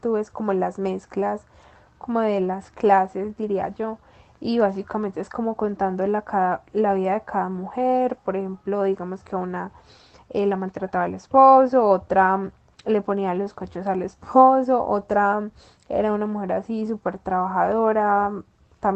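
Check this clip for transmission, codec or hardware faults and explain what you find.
Nothing wrong turns up here; the speech sounds like an ordinary call, with the high end tapering off around 8 kHz, which fits an Opus call path doing its normal job.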